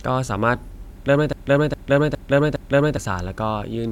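A broken-record loop runs from 1.33 to 2.97 s in this speech clip: a 0.41 s fragment repeats exactly, back to back, four times. The likely cause is a stalled player, encoder or stream resending its last buffered piece, so the audio meant for that span is lost.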